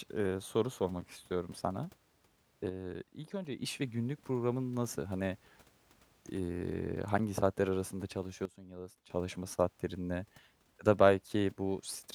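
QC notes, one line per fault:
2.69–3.62 s and 8.45–9.10 s, sudden gain jump: the level drops by about 6 dB just before "ve günlük programın nasıl", then by about 13 dB between "saatler arasında" and "saatlerin ne". Each time, speech and background noise fall and recover together from one sample to the next, with no fade. That points to a gain setting likely applied without a ramp. A fade-out would slope instead, and a dropout would silence the sound entirely.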